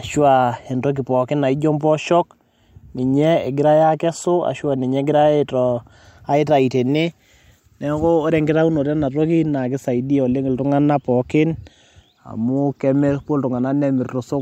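No technical faults are audible.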